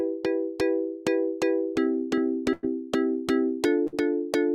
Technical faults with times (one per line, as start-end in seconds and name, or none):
2.53-2.65 burst of packet loss
3.87-3.94 burst of packet loss